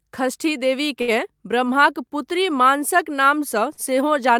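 Short stalls from late packets occur at 1.01 to 1.10 s and 3.74 to 3.90 s in this speech clip. Each time a packet arrived late, the jitter buffer ran dry and the receiver held the last sound, for about 66 ms and then 34 ms, before resuming at the same point. Nothing is lost, but the speech is briefly stretched with a faint buzz or dip.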